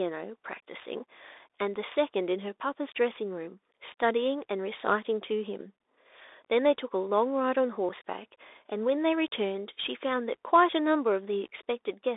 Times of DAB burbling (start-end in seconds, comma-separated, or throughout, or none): none